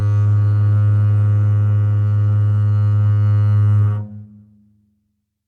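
No technical faults are audible.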